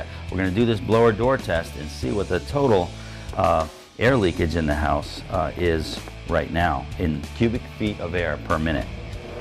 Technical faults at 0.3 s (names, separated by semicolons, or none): none